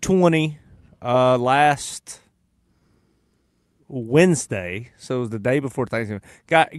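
From start to finish there is clock drift between sender and receiver. The sending side's clock runs slow, by roughly three percent. The receiver's jitter buffer keeps draining as a result. It never settles. Small timing hiccups recur at uneven gaps. Through the call path, the sound has the band limit near 12 kHz and the usual coding texture that fit Opus at about 64 kbps.

Repeated timing corrections run from 0.12 s to 6.78 s. The receiver keeps repeating short slices of audio to fill the gaps the slow sender leaves. Every edit goes the same way. Together they stretch the sound by about a fifth of a second. Playback runs at 97 percent speed. The effect is a faintly dragging, unsteady tempo, with occasional tiny stutters where a slice repeats.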